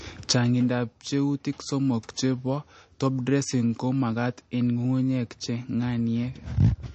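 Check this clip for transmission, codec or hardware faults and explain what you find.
One codec fault runs through the whole clip. The speech has plainly audible MP3 compression damage: nothing above 8.3 kHz, and a watery, swirly texture where weak frequency lines drop in and out between frames. The likely cause is an MP3 encoder short of bits, which fits a low bitrate around 34 kbps.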